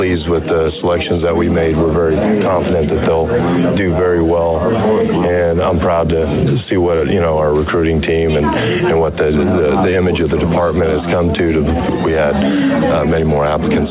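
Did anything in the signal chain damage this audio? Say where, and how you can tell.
No, nothing in the chain has damaged this audio. It has come through a call path, and the spectrum stops at 4 kHz, which fits a narrowband telephone codec such as 64 kbps G.711.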